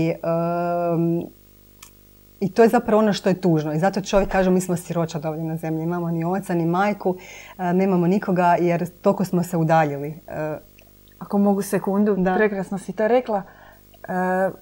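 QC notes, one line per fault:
Throughout: video or display buzz. A 50 Hz field-rate buzz with hash above it, plus a high whine at 15.6 kHz from the line rate, sitting about 30 dB below the speech. On a spectrogram: a stack of 50 Hz harmonics and a thin steady line near 15.6 kHz.
12.01–13.73 s, just after "ako mogu": channel delay (comb filtering). One channel lags by roughly two samples, a few hundredths of a millisecond, and the mono sum cancels near 10 kHz. The top end turns dull. On a spectrogram a dark notch band appears around 10 kHz for this stretch.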